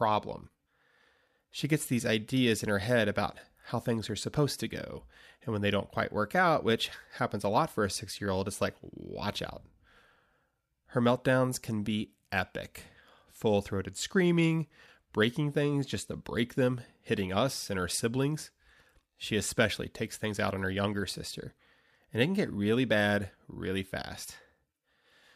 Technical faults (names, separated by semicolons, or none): none